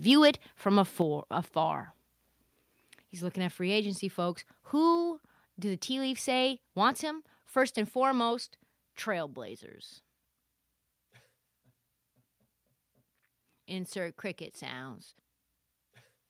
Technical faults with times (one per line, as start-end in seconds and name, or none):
0.09-0.29 microphone overload
1.02 microphone volume stepped down
4.95 microphone volume stepped down